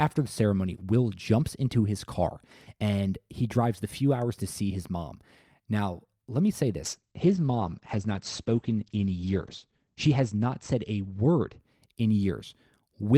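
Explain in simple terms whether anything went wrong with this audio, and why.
Something went wrong from 6.84 s to about 12.85 s, right after "let me say": a call bitrate drop. The connection's estimate of available bandwidth fell, so the system told the speech encoder to squeeze the sound into far fewer bits, hitting its worst point for about 3 seconds. With so little data, the encoder keeps only the rough outline of the speech and discards everything above about 8 kHz, so the voice sounds muffled and coarse until quality recovers.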